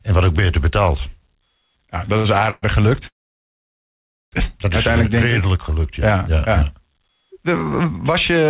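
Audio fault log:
2.06–2.64 s, repeated stalls (stutter): the sound catches four times in quick succession, with the longest hold about 119 ms and roughly 223 ms of filled-in audio in total, over a third of this short span. Packets were reaching the receiver late or too slowly, so its jitter buffer kept running dry. Each time it stretched the last sound until data returned. Nothing is lost, but the passage drags and judders, and the muffled, narrowband G.711 character of the call stays audible throughout.
3.07–4.34 s, call audio freeze: the sound halts and the last fragment trails off into near silence for about 1.2 s before the audio resumes exactly where it left off. This is likely a delivery hold-up on the network that emptied the jitter buffer completely, so the receiver briefly extended the final sound and then had nothing to play. Nothing is missing afterward. The whole stall becomes an inserted gap of about 1.25 s, pushing everything after it later.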